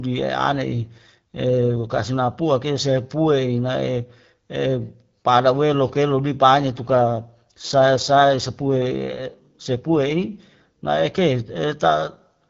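Speech over an AMR wideband (HD Voice) link has two AMR rate drops, at 0.64 to 2.10 s and 6.58 to 10.28 s. Bandwidth holds with no gaps, but the voice turns rougher and more synthetic, which fits a step down from 12.65 to 8.85 kbit/s to free bits for error protection.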